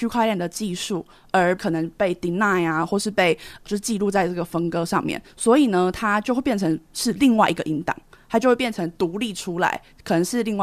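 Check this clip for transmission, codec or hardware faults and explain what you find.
No faults detected in this recording.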